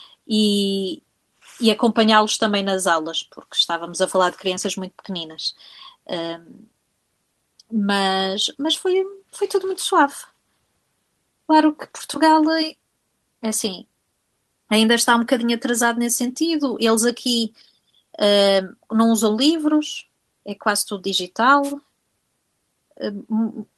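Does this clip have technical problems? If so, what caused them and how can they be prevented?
Yes. A wireless microphone noise hit from 21.63 to 21.73 s is a brief static swish as the FM signal fades; unlike a digital dropout, noise replaces the speech rather than silence. Prevent it with diversity receivers, good antenna placement and a clear line of sight to the transmitter.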